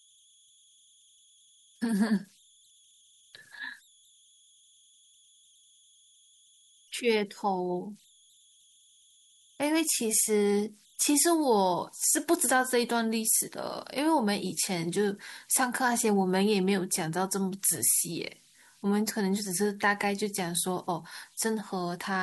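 Converter idle tones run throughout the clip. A delta-sigma converter working without dither settles into repeating bit patterns whenever the speech drops to low levels, and those patterns produce a spurious tone, here sitting somewhere around 3 kHz. The error lies about 35 dB below the signal, so it comes through as a faint high whistle in the pauses between phrases and as a grainy, slightly chirping texture beneath quieter passages of speech.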